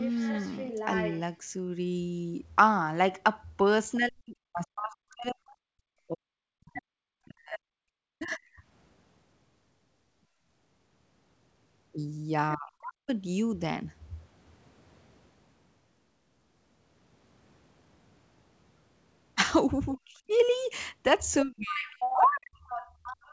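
From 0.0 to 1.2 s a second, quieter voice sits about 10 dB under the talker. This is the other side's voice leaking through, likely loudspeaker echo the echo canceller failed to remove.

From 3.97 to 8.44 s the talker's speech sinks, dropping by around 40 dB at worst. This is speech suppressed in double talk: both sides likely spoke at once, and the canceller turned everything down.

Within that stretch, from 6.75 to 7.57 s, the far voice leaks through again, roughly 15 dB below the speech.

The same double-talk suppression returns at 12.56 to 13.11 s, 19.95 to 20.32 s and 21.44 to 22.63 s, with dips of around 35 to 40 dB.

From 21.69 s to the end, the other side's voice leaks through once more at about 10 dB under the talker.

At 22.93 to 23.04 s the room sound briefly dips by about 15 dB and then returns. This is background gated by the echo canceller, which clamped the microphone while the loudspeaker played.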